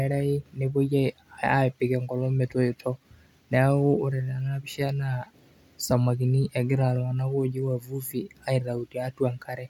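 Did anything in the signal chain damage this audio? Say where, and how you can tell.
No, nothing in this speech recording points to damage at any stage of the chain.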